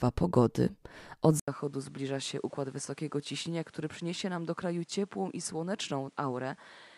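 A speech clip that changes character abruptly at 1.40 s. After a gap of about 80 ms, the sound returns duller and roughly 10 dB quieter, with nothing above 11.4 kHz and a new background noise sitting around 30 dB below the speech, all of it lasting to the end. This is likely an input switched to a poorer device. A simple bandwidth drop would narrow the band without the silence, the level shift and a different noise floor arriving together.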